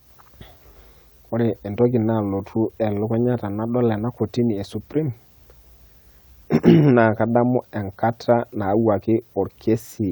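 Nothing in this recording jumps out as a technical fault, so there's really nothing here to walk through.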